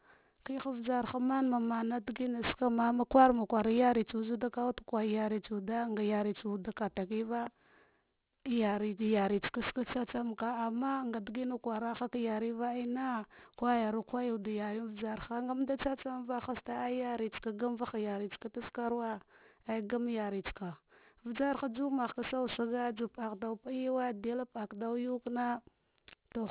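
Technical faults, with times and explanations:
Throughout: aliasing. Sibilants come out gritty and metallic, with harsh tones at pitches unrelated to the speech, and the spectrum runs hard up to a wall at 4 kHz. The sample rate was cut, which points to a drop from 44.1 kHz to 8 kHz, without first filtering away content above half the new rate. Everything above 4 kHz folds back below it, landing at false frequencies roughly 20 dB under the speech.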